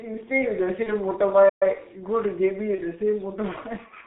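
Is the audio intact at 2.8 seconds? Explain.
No. From 2.75 to 2.82 s there is VoIP packet loss concealed by the speech codec. The gap fits one lost 30 ms frame. The decoder filled it by repeating its last pitch and filter at falling gain. That produces a brief buzzy or noisy, fading smear. The codec's G.723.1 coding is also present there, as it is throughout. It cuts everything above 4 kHz. Its slow voice model and low rate, which points to about 6 kbit/s, leave the speech heavily muffled and hoarse, with blurred consonants.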